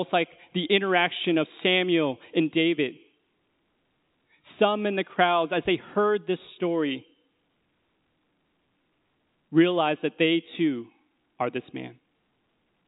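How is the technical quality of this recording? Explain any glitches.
The speech comes through intact with no glitches, carried in ordinary G.711 A-law telephone coding whose band stops at about 3.8 kHz.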